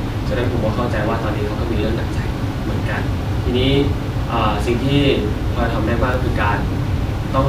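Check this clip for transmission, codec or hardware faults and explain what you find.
One fault stands out, a single click at 6.14 s in the speech. It sounds like dropped samples. The click is sharp and isolated, with no gap or muffling around it. The likely cause is a tiny piece of the stream going missing, well under a millisecond. The waveform then jumps straight from one value to a later one. That sudden step makes a brief broadband tick, a thin vertical line across the spectrum. No sound is lost.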